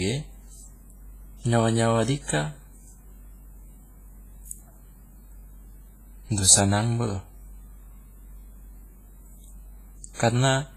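WMA compression runs through the whole speech clip, heavily damaged from start to finish. The speech has a ringing, washy quality, and a hiss rises and falls with the voice instead of sitting at a steady level. Nothing is present above 15.4 kHz. The likely cause is a transform codec of the WMA kind at a low rate, which fits a stream around 24 kbps. Its long blocks smear quantisation noise over tens of milliseconds, and the weaker spectral detail is discarded.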